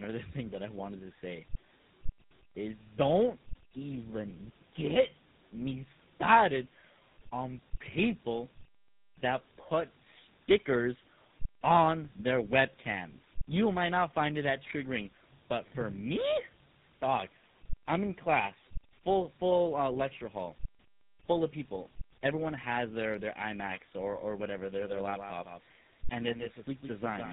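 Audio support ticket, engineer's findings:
Rough, muffled, warbly sound for the whole clip, with nothing above 3.8 kHz. Tandem speech coding: the signal passed through three speech codecs in a row (CVSD, then iLBC, then GSM full rate), bridged by G.711 A-law hops. It was decoded and re-encoded at each link border, so every coder compounded the previous coder's damage.

From 24.76 s to the end, a second full-band copy of the audio trails the original by roughly 150 ms, about 10 dB quieter. It has no decay or room colour and starts abruptly. Doubled audio track, likely from a slower parallel capture path or an edit leaving two offset copies mixed together.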